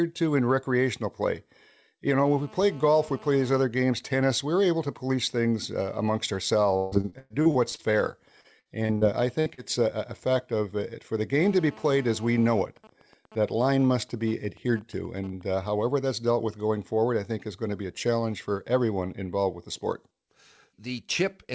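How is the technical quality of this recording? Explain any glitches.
Technical quality is compromised by radio interference from a nearby phone and by several stretches of lost call packets, heard through a G.722 path that carries nothing above 8 kHz.

GSM phone buzz, 2.25–3.64 s and 11.41–12.61 s: a 2G handset in a call transmits 217 bursts per second, which the audio circuit rectifies into a hard, raspy 217 Hz buzz about 23 dB below the speech.

GSM signalling bursts, 12.65–15.66 s: the same phone, its user silent, sends only sparse burst groups, heard as even ticks with a longer buzz twice a second, slightly quieter.

Repeated packet loss (robotic sound), 6.77–7.81 s and 8.41–9.04 s: eight and then four gaps, up to 147 ms long, are each patched by extending the previous sound, giving choppy speech with pieces missing.

Burst of packet loss, 9.40–9.48 s: about 60 ms failed to arrive, so the receiver held and faded the last sound before the speech resumed past a missing gap.

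Short concealed packet loss, 9.54–9.60 s: roughly 30 ms went missing, filled by extrapolation and blended back, leaving a brief smear or wobble.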